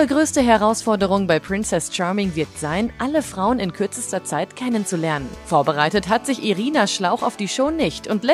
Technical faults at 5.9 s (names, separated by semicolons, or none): GSM phone buzz